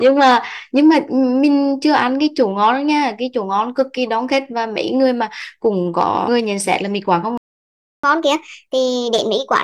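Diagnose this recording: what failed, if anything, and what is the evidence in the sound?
Playback went wrong near the end. At 7.38 s the speech cuts out mid-flow and stays silent until 8.04 s, a gap of about 660 ms. That's a playback stall: the output has nothing to play and just sits there. The likely cause is the player's buffer running dry or its audio thread getting blocked for a moment. Either way, it's a playback-stage problem rather than anything in the recording chain.

Right after the gap, from 8.04 s to the end, the speech comes back fast and high. It runs at 1.25 times normal speed, and the pitch goes up by about four semitones, which gives it that chipmunk edge. That's catch-up at higher speed. The player resamples the backlog it built up during the stall so it can win back the lost time. Speed and pitch rise together because it's plain resampling, with no time-stretching.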